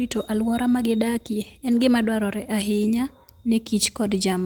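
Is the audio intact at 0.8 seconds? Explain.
Yes, the audio at 0.8 seconds is intact, with no fault at that moment.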